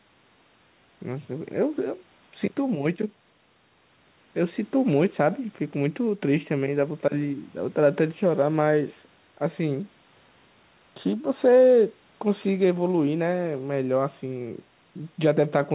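No faults found in the speech; the band stops at 4 kHz, consistent with a G.711 A-law narrowband call path, and the bass roll-off from the call microphone's high-pass filter is normal.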